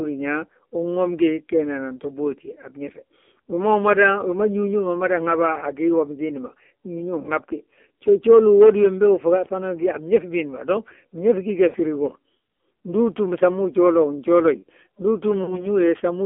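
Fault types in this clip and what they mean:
AMR narrowband mobile codec: The whole clip is squeezed into a telephone band of roughly 250 to 3400 Hz, so nothing reaches 4 kHz, and heavy coding damage leaves the speech buzzy and synthetic, which points to a low mode around 5.9 kbps. A plain band-limited line would sound dull but clean. Here the vocal-tract model and sparse pulse excitation add a metallic, artificial grain of their own on top of the missing top end.
lost AMR speech frames: At 11.68 to 11.77 s and again at 15.44 to 15.68 s, the speech smears and warbles as the decoder reuses its last good pitch and vocal-tract settings with falling gain. The first gap fits about three lost frames and the second about two. A plain dropout would cut to sudden silence. Here the sound stretches and fades instead, and the speech returns briefly weak or rough before it steadies.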